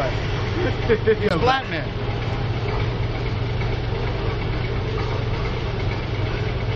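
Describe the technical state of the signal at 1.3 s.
At 1.29 s there is a gap between stream segments, a hole of about 17 ms. The timestamps of adjacent segments fail to meet, so the player inserts silence at the boundary. The sound cuts out with hard edges and then resumes.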